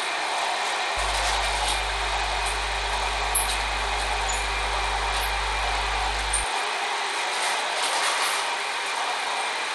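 An everyday sound recording has gritty, flickering treble throughout, likely from Bluetooth SBC compression at a low bitrate fitting 96 kbps. A spectrogram shows blinking, patchy upper bands.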